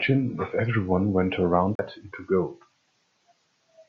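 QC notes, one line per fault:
1.75–1.79 s, CD skip: a mute of roughly 40 ms, after which the speech resumes from another point on the disc's spiral rather than continuing.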